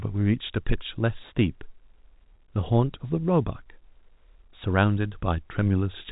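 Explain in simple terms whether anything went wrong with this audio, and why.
Nothing went wrong here: the speech has the slightly narrow, phone-line quality of ordinary telephone coding, which leaves out everything above about 3.8 kHz, and that's just how a regular landline carries sound.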